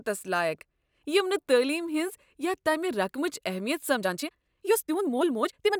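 From 3.92 s to the end, the speech suddenly rushes ahead at about 1.66 times its pace while the pitch stays put, sounding rushed. This is a time-stretched section, likely software squeezing the audio by dropping short pieces to preserve pitch.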